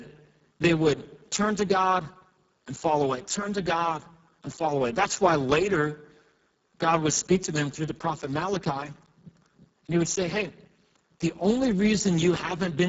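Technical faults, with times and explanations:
throughout: Speex codec, heavy damage. The speech sounds hoarse and noisy because the CELP coder has too few bits to model the excitation, which fits a very low setting near 6 kbps. Nothing reaches above 7.6 kHz, and the upper band is only a thin, noise-like fill.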